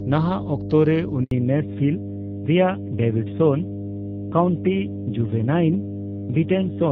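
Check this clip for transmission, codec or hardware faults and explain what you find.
Three faults are present: a constant mains hum, a short dropout at about 1.23 s, and a permanent loss of high frequencies after it.

Mains hum runs throughout as a steady 50 Hz tone, fairly strong, roughly 10 dB below the speech. It comes from a ground loop or transformer leaking power-line current into the signal. Its unchanging pitch separates it from fan or motor noise.

A handover gap runs from 1.23 to 1.31 s, an 80 ms silence where the call switched networks and no speech arrived. The sound fades and stops cleanly rather than smearing or repeating as concealed packet loss would.

A fallback to narrowband follows from 1.31 s to the end. The earlier wideband sound, which points to HD Voice around 12.65 kbit/s, gives way to a rougher, duller codec, likely AMR narrowband near 7.4 kbit/s, with nothing above 4 kHz. 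The added raspiness sets it apart from simple low-pass filtering.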